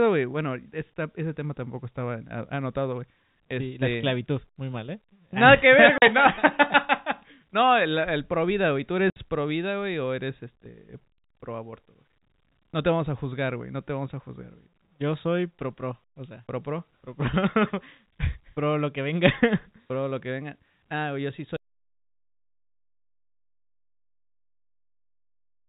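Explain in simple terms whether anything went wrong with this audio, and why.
Two short holes cut into the speech, at 5.98 s (40 ms) and at 9.10 s (60 ms), each with abrupt edges. This is packet loss filled with silence: pieces of the stream never arrived, and the receiver played nothing in their place. The gap lengths fit 20 ms packets.

From 21.57 s to the end, the speech stops dead and leaves complete silence, with no room sound at all. This is an audio dropout to silence, likely from the input being lost through a disconnected device, a failed link or an accidental mute while recording carried on.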